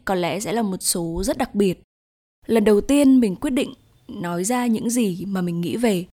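No technical faults can be heard anywhere in the speech. Nothing in the recording calls for a timestamp or an explanation.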